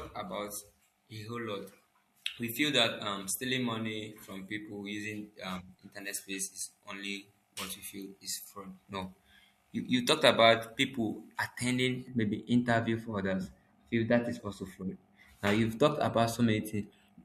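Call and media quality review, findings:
Pre-emphasis left on, 0.0 to 12.1 s: speech thin, bright, over-sibilant; treble about 11 dB above 1 kHz level at 10 kHz, fits a J.17-type curve. Encoder-side boost without matching receive de-emphasis. Spectrogram: upper band progressively hotter with frequency, sibilants dense. Waveform: spikier, high-frequency-heavy peaks. Tonal balance shifts after 12.1 s.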